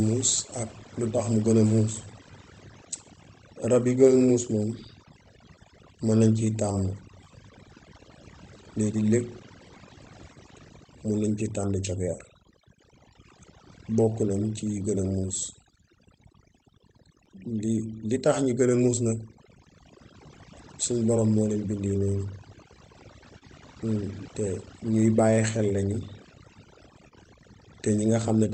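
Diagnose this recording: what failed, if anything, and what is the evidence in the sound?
Overdone noise removal, in call processing, runs through the whole clip. The background falls to near silence with twinkling specks as quiet parts of the voice are pulled down with the noise. Broadband hiss left in would point elsewhere; here the hiss is replaced by specks.

Clock drift between sender and receiver sits at the driver or buffer stage, with the sender's clock running roughly 1.5 percent slow against the receiver's. Unlike a single network glitch, it never settles. The jitter buffer keeps draining for the whole clip, and that drives the corrections below.

Repeated timing corrections run from 0.46 s to 28.1 s, slowing playback to 99 percent and adding about 400 ms in total. Each repeat is small, heard only as faint hiccups or a slightly unsteady tempo at uneven spacing. That uneven spacing separates them from chunk seams, which fall on a fixed grid.

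Overlapping chunks come from processing or transport and produce a click or stutter at 7.25 s, 17.26 s and 27.27 s, where 12 ms plays twice. The exact 10 s spacing points to chunk boundaries where each chunk starts before the last one ended, not to clock drift.

Short stalls from a late packet happen at the network and jitter buffer. At 23.38 s the last sound is held for 28 ms, and at 27.08 s for 30 ms, with a slight buzz or dip and nothing lost. A dropped packet would leave a gap, but here the sound resumes where it left off.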